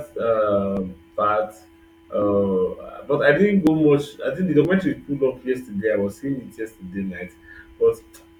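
At 0.77, 2.22, 3.67, 4.65 and 6.12 s the speech jumps abruptly, a pattern most likely caused by a dropped buffer (overrun). Samples were overwritten before being read, and the surviving audio was spliced end to end without a gap. Each skip loses roughly 20 ms, and the one at 4.65 s about twice that. The waveform shows a sudden discontinuity at each point, and a spectrogram shows a thin vertical broadband line there.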